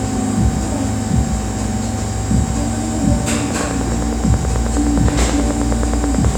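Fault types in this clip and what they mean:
Train of clicks: from about 3.51 s right through to 6.36 s there's a steady ticking laid over the sound, roughly 9.5 clicks a second at an even spacing, so around thirty near-identical pulses in all. They stick out about 10 dB above the audio underneath and keep going through quieter moments too. That regular, repeated pulse most likely comes from interference from nearby equipment or a faulty connection or power supply.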